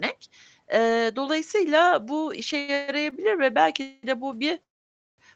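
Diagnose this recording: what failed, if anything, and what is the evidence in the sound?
Network and jitter-buffer stage, short stall from a late packet: at 2.59–2.70 s one speech sound is held about 88 ms too long, and at 3.10–3.14 s a brief 18 ms stretch follows. The receiver's buffer ran dry when a packet came late, so the decoder prolonged the last sound with a slight buzz or dip, then resumed at the same point. Nothing is lost.

Same stage, call audio freeze: at 2.74–2.90 s (138 ms) and 3.82–4.05 s (212 ms) the speech stops advancing and the held sound turns into a fading buzz or hiss. At 4.63–5.20 s the gap grows to 550 ms, about 530 ms of it silent, before speech picks up where it left off. The cause is likely a longer network hold-up that emptied the jitter buffer through the Opus call path, whose 8 kHz bandwidth limits the top end throughout. It differs from a stall by the fading of the held sound and the longer inserted gap.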